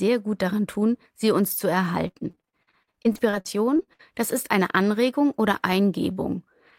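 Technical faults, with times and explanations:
2.07–4.01 s, repeated packet loss (robotic sound): after "tun sie uns zu", packets kept arriving lost or late, about twenty short holes, the longest 60 ms. Each was patched by stretching the previous sound, covering about 30% of the span, so the audio turns choppy and robotic until "das ist eine".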